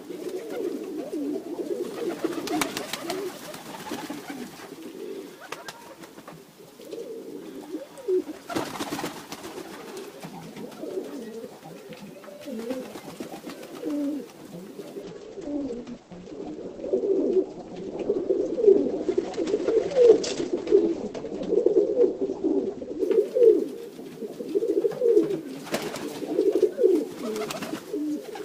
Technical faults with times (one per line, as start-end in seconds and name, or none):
15.02-23.02 adaptive stream at a lower bitrate